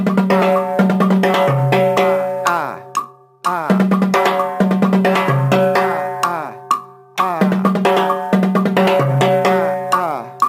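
A faint hiss and roughness from sample clock jitter run through the whole audio, rising with loud, bright passages and disappearing in quiet gaps. The converter's clock wanders by roughly a microsecond or two, so each sample is taken a little early or late, and steep waveform slopes turn that timing error into noise around 45 dB below the signal. A spectrogram shows a broadband haze that appears only under loud, high-frequency content, while the waveform looks essentially unchanged.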